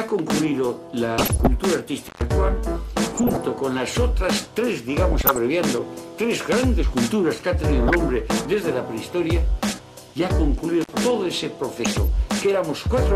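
The whole clip sounds dull and band-limited, with a gurgling, granular edge as upper bands drop in and out and the remaining ones are coarsely quantised. That is likely MP2 compression, and the plainly audible damage fits a rate around 80 kbps. Over this, DAB burbling appears at 1.18–1.47 s, 3.16–3.49 s, 5.12–5.38 s, 7.88–7.97 s, 9.66–9.73 s and 11.84–11.98 s. These are short bursts where corrupted data has slipped past error correction, putting blips of noise into single sub-bands and knocking sub-bands out of level for up to a frame. The bursts at 1.18 s and 5.12 s carry the heavier error rate. Intermittent contact cuts the audio at 2.07–2.22 s and 10.81–10.90 s. The signal drops out for about 120 ms and then about 50 ms, with crackle at each edge, as a loose plug or cable briefly opens.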